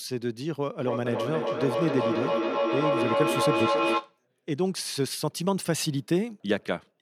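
From about 0.8 s to 4.2 s there's a feedback echo between two devices. Two devices in the same room are on the call, so one device plays what the other's mic sent, that mic picks it up again, and neither echo canceller catches the other's playback. You hear the speech come back roughly every 0.3 s, thinner and ringier each pass. The repeats build up rather than fading, peaking at about 1 dB above the speech itself.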